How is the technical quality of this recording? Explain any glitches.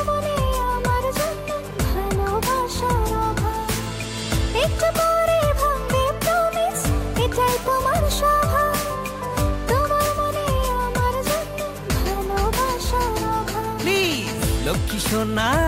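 The recording carries no audible technical faults anywhere in its duration.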